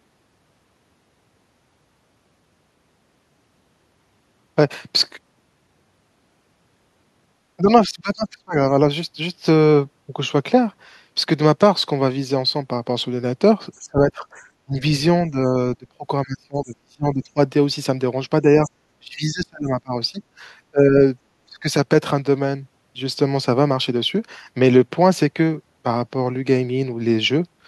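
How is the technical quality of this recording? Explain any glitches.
The recording suffers from repeated speech suppressed in double talk. The dips fall at 7.57–8.56, 13.81–14.25, 14.65–14.75, 15.3–17.39, 18.42–20.19, 20.71–21.01 and 21.46–21.67 s. The likely cause is an echo canceller that heard both ends talking together, could not tell the near voice from loudspeaker echo, and clamped down on everything. The speech sinks by about 20 to 30 dB, sometimes in broken fragments, the longest stretch near 15–17 s.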